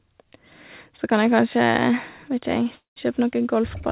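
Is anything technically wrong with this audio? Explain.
Yes. A call audio freeze runs from 2.75 to 2.98 s in this speech clip, band-limited to 4 kHz by the G.711 call path. The likely cause is delayed packets draining the jitter buffer: the last sound is stretched into a fading buzz, about 130 ms of silence follows, and speech resumes roughly 0.21 s late with nothing lost.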